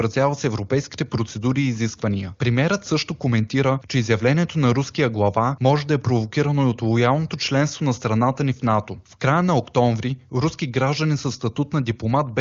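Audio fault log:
No faults heard anywhere in this speech recording.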